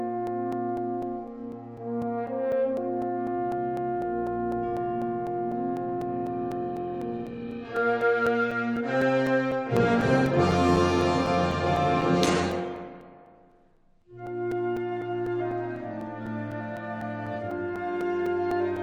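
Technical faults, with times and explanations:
0.27–18.77 s, periodic USB or driver dropouts: every 0.25 s a few milliseconds are blanked to silence, giving evenly spaced ticks heard only under signal, unlike random clicks.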